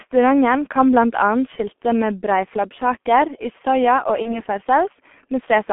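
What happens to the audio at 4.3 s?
At 4.3 s there is VoIP packet loss concealed by the speech codec, affecting roughly 4.22 to 4.43 s. A short stretch of the speech went missing, and the decoder filled it by repeating its last pitch and filter settings while lowering the gain. What you hear is a brief continuation, a buzzy tone or coloured noise that fades, rather than silence, which fits a single lost 30 ms frame. Because each decoded frame builds on the one before, the voice stays weak or distorted for about 170 ms after the gap itself. That lingering recovery, with no hard cut to zero, is what separates it from a plain dropout or a digital mute.

Underneath, the whole clip carries heavy G.723.1 codec damage at 6.3 kbit/s, confined to roughly 200 Hz to 3.4 kHz. That is why the surrounding speech already sounds muffled and hoarse, with soft consonants. The damage is a steady colouring across the clip, unlike the localized stumble at 4.3 s.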